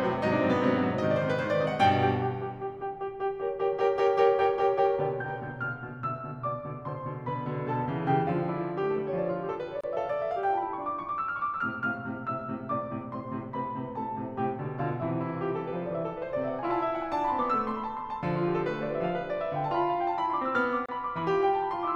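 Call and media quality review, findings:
Music. Gap at a join of encoded pieces, twice: 9.81 to 9.84 s and 20.86 to 20.89 s. Each is a dropout of about 29 ms in continuous sound, edges smeared. The music resumes exactly where it stopped. Probable component: segment concatenation after encoding. Mechanism: each piece was encoded separately. The encoder's start-up delay and final-frame padding were never trimmed, so that silence sits at every join.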